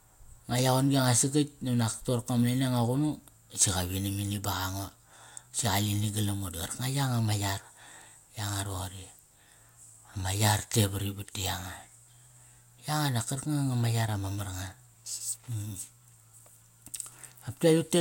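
Nothing in this recording of speech stands out as a technical fault, so there's nothing to flag here.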